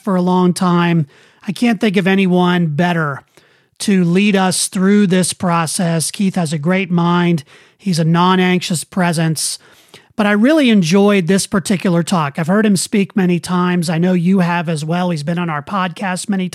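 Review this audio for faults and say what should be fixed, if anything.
A Bluetooth SBC bit pool drop runs from 4.03 to 7.23 s, after "of anyone better to" until "he's a non anxious". The speech turns dull and gritty. That fits a bit pool cut from 28 to about 13. Give the link a clearer radio path to prevent it.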